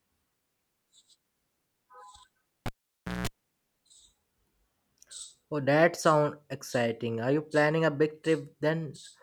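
From 2.66 s to 3.27 s the speech is interrupted by a cable pulled and plugged in: a pop, about 0.56 s unplugged, mostly near silence but including a 0.18 s burst of 60 Hz mains buzz as the plug tip makes partial contact, and a second pop as sound returns. The grounding buzz separates it from a simple dropout.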